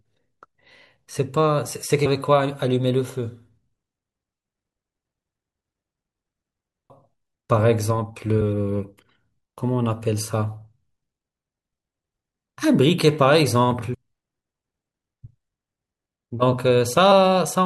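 The speech jumps forward at 2.05, 6.89, 8.40, 13.93 and 17.11 s, losing roughly 300, 150, 200, 300 and 100 ms. These are compressed frames skipped: whole blocks of about 21.3 ms never reach the output. On a spectrogram, harmonic tracks break at a thin vertical seam and resume elsewhere. The waveform envelope steps abruptly with no silent gap.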